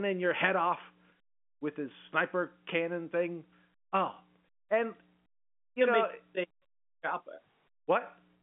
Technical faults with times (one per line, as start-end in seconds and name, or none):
none